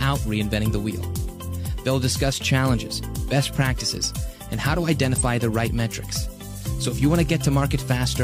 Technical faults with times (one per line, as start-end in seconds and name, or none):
none